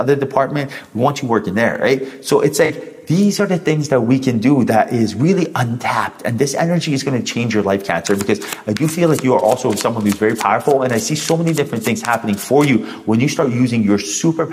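At 2.65 s, running to about 2.71 s, a brief smeared, noisy and phasey patch replaces the sound, lasting only a few hundredths of a second before clean playback resumes. This is AAC frame loss with concealment. A gap of roughly 43 ms, which fits two consecutive frames going missing, left the decoder with no data, so it rebuilt that stretch from the last good spectrum with randomised phase, producing the washed, unfocused texture.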